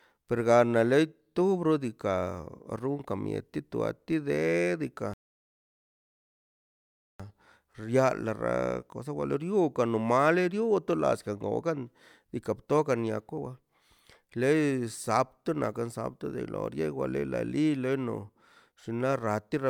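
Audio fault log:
5.14 to 7.20 s, rebuffering stall: the speech drops to silence for about 2.06 s because the player ran through its downloaded audio and had to wait for more data. Playback then picks up exactly where it halted, so nothing is skipped, only time added.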